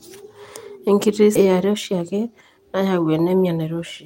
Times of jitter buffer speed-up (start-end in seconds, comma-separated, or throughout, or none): 1.45-3.46